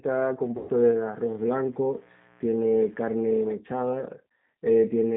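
Speech with a thin, slightly rough and synthetic character throughout, confined to roughly 150 Hz to 3.7 kHz with nothing above. That is G.729 codec damage: the voice is rebuilt from a vocal tract filter, a pitch predictor and a few pulses per frame, which points to an 8 kbit/s G.729A VoIP link. From 0.45 to 3.09 s a steady, raspy buzz sits faint beneath the speech, roughly 30 dB down. This is mains buzz at 60 Hz: sharp switching spikes from a dimmer, rectifier or missing shield, twice per mains cycle, spread harmonics up into the kilohertz range. From 0.57 to 0.72 s the speech is stretched out and fades, and stays weak just afterwards. That is VoIP packet loss concealed by the speech codec. About 120 ms of audio went missing, which fits six 20 ms packets, and the decoder filled the gap by extrapolating its last pitch and filter at falling gain.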